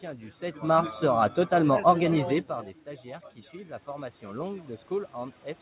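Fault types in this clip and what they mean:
Automatic gain rising: right after "totalement organisé par des", the input level falls by about 16 dB, so the gain control judges it too quiet and slowly raises its gain by about 7 dB from 3.03 to 5.45 s, lifting the voice and the room noise together. On a waveform the envelope steps down and then widens steadily. On a spectrogram the whole band, noise floor included, brightens evenly over those seconds.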